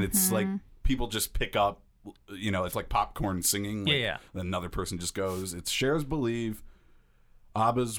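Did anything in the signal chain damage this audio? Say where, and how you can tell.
Yes. Two wireless microphone noise hits occur in the analogue radio link before conversion. A brief static swish runs from 2.67 to 2.75 s, just before "like popcorn singing", and a longer burst from 5.25 to 5.45 s follows "person just". Reflections cancel the FM carrier, so receiver noise surges over the speech.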